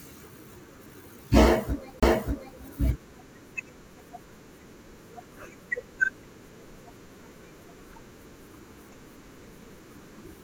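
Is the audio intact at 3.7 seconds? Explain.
Yes, the audio is intact at 3.7 seconds, with no dropout, click, distortion or other fault audible at that point in the speech.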